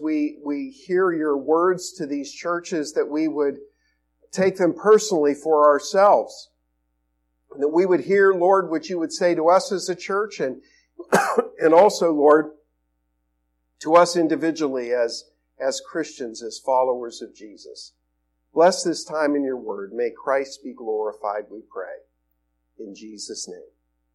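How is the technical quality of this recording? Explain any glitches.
No glitches or technical faults can be heard here.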